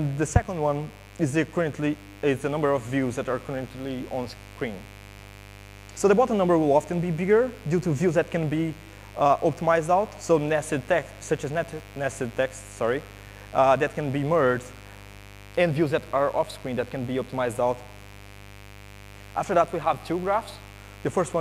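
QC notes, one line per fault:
Throughout: mains buzz. Interference from the 50 Hz supply, entering through something like a dimmer, rectifier or an unshielded lead, adds sharp spikes twice per cycle. Its harmonics stack up into a steady, raspy buzz, roughly 20 dB below the audio.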